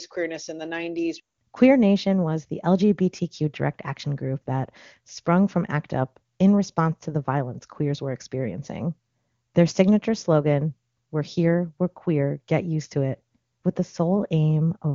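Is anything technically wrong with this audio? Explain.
No, nothing is technically wrong with this audio.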